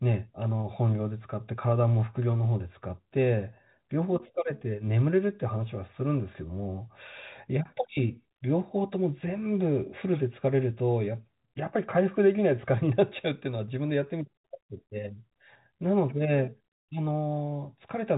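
No technical faults occur in this speech; it carries the usual telephone band, with nothing above 3.8 kHz.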